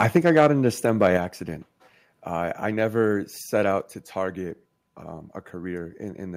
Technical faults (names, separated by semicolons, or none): microphone overload; microphone volume stepped down